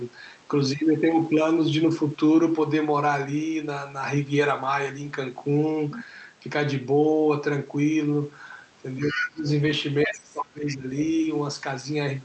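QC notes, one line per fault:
5.93–6.01 s, other side's voice leaking through: a brief scrap of a second voice, well below the talker, likely loudspeaker echo the canceller missed. It is an added voice, not a dip.
8.98–9.48 s, speech suppressed in double talk: the talker drops by a deep margin for most of this half second, likely the canceller ducking both voices while they overlap.
9.08–9.27 s, other side's voice leaking through: likely residual echo nearly as loud as the talker, inside the suppressed stretch rather than replacing it.
10.05–10.89 s, speech suppressed in double talk: a strong dip across this stretch. The talker's own level falls.
10.69–10.75 s, other side's voice leaking through: a faint fragment of the far voice, well under the talker, likely echo slipping through the ducked speech.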